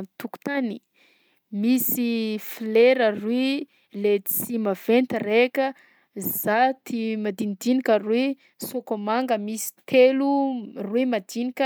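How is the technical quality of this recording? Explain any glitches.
No glitches or technical faults can be heard anywhere in this speech recording.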